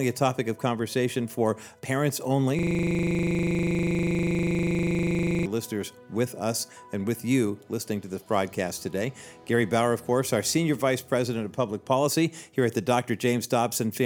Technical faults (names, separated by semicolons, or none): system hang loop